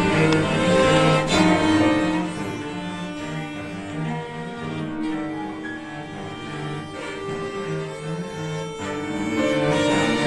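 A level change between 8.92 and 9.78 s is applied in discrete jumps rather than a continuous ramp, producing zipper noise. The gain moves through roughly 10 dB in about fifty steps per second, each landing abruptly on the waveform. Every jump leaves a tiny click, so for that stretch a fast, buzzy ticking rides on the sound.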